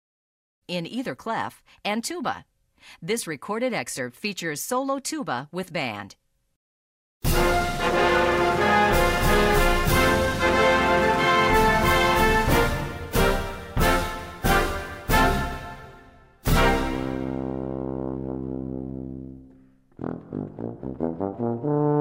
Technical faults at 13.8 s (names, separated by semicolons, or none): none